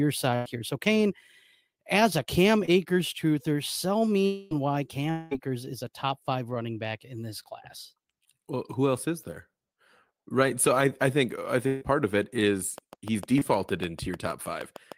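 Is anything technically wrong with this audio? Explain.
Yes. The speech is interrupted by several network losses and, near the end, by a steady train of clicks.

Burst of packet loss, at 0.35 to 0.47 s and 11.67 to 11.83 s: a run of consecutive packets failed to arrive in time, about 100 ms of audio the first time and 140 ms the second. The receiver bridged each hole by extending the last sound and letting it decay. You hear a held buzz or fading hiss, after which the speech resumes with that stretch simply gone.

Short concealed packet loss, at 2.65 to 2.69 s and 13.39 to 13.43 s: each time, only about 20 ms of audio failed to reach the decoder. The concealment stretched the preceding sound across the gap and blended back into the real signal. Because the repair is so short, each comes across as a quick smear or wobble, enough to blur or swallow a brief consonant.

Long network dropout, at 4.25 to 4.53 s and 5.11 to 5.33 s: the stream likely stopped delivering audio for these stretches, losing about 260 ms and then 200 ms. 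Concealment filled the entire gap both times, so there is no silence, only a prolonged, decaying buzz or hiss. The speech then picks up further along, with the lost portion missing.

Train of clicks, from 12.78 s to the end of the clip: a repeating pulse, likely interference or a faulty connection, sits on top of the audio at an even rate of about 6.5 per second. The clicks share the same shape and peak at about 5 dB above the speech. They sound like steady ticking that continues through pauses as well as through the words.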